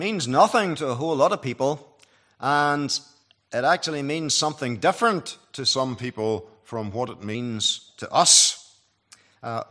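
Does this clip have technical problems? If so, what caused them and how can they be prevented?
Yes. From 5.71 to 7.35 s, a wrong sample rate plays the samples slower than recorded, about 0.92 speed, which fits 24 kHz audio played at 22 kHz, dropping the sound about 1.5 semitones. Prevent it by resampling to the output device's rate, or by passing the true rate with the stream.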